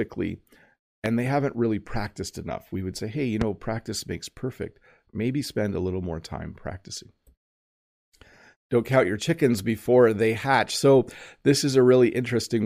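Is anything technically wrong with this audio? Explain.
Yes. Two loud pops break in: a sharp thump at 1.06–1.08 s, just before "they haven't really practiced", about 15 dB above the speech, and another at 3.41–3.44 s, between "would say hey you" and "practice makes perfect", about 10 dB up. Both are likely from a sudden voltage spike such as a plug or switch transient. A repeated buffer causes a tiny click at 8.88 s, just before "count your chickens before", and again at 10.45 s. Late audio made the device replay a roughly 1.5 ms block, which fits a 64-sample buffer.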